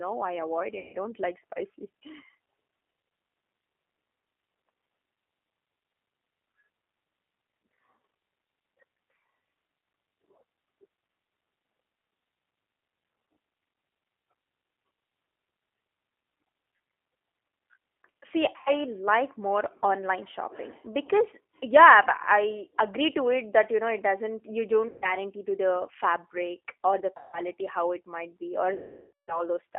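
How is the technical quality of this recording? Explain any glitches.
The technical quality is poor: the speech is narrow-band and rough throughout, with five dropouts that turn into fading buzz or noise.

The whole clip sounds thin, slightly synthetic and gritty, with nothing above 3.5 kHz or below 300 Hz. This is G.729 codec damage: an 8 kbit/s coder rebuilds speech from a pitch predictor, a vocal tract filter and a few pulses per frame.

There are five gaps that smear into a buzzy tone or coloured noise that decays. The first runs from 0.79 to 0.97 s, between "I avoid" and "don't like spicy". The second runs from 18.56 to 18.71 s. The third runs from 24.88 to 25.14 s, after "it doesn't you" and before "to the fabric or". The fourth runs from 27.17 to 27.40 s. The longest runs from 28.74 to 29.44 s, after "it might be or". These are VoIP packet loss concealed by the speech codec. The decoder keeps extending its last pitch and filter while turning the gain down, and speech stays weak for a moment after packets return. 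The lengths fit roughly 100 to 160 ms of lost packets, and about half a second in the last case.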